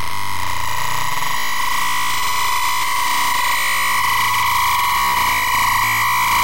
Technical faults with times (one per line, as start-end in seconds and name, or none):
none